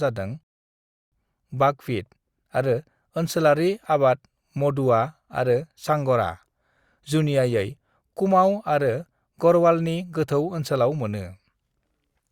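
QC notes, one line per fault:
0.43–1.12 s, rebuffering stall: the player exhausted its downloaded audio and halted until more data arrived, so the speech drops to silence for about 0.69 s, then picks up exactly where it stopped at "बाकविट आरो ओनसोलारि", with nothing lost but time added.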